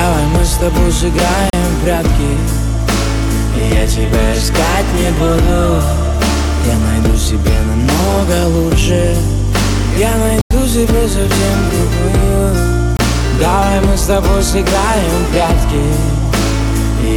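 At 1.50 s, 10.41 s and 12.97 s the sound drops to blocks of digital silence lasting 34, 93 and 23 ms. Output buffers likely went unfilled, which fits 4096- and 1024-sample blocks. Each cuts out and back with no fade; the longest gap is heard as a hole.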